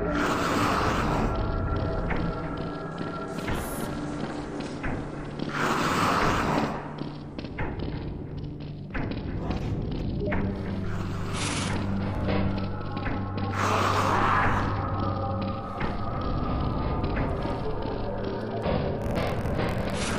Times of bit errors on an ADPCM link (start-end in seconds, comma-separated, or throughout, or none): none